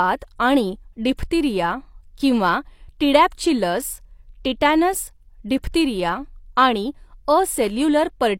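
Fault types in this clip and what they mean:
Pre-echo: the transform codec spread quantisation noise across a whole block, so noise scaled for a sharp attack near the end of the block also filled the quiet moment just before it. In this speech clip that shows up twice, at 1.17 s and 5.63 s, as a short hiss running ahead of the onset by about 18 ms and 11 ms respectively, leaving each attack softened and smeared.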